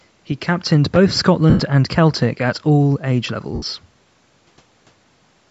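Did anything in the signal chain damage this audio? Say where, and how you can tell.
Yes. Lost LE Audio frames on the Bluetooth link, at 1.50 s for 98 ms and 3.54 s for 75 ms: the decoder repeated the last spectrum, smearing the speech into noise.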